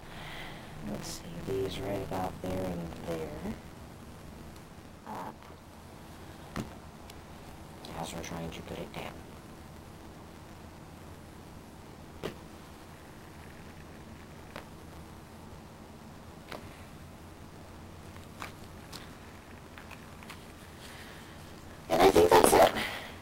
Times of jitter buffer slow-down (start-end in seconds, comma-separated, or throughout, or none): none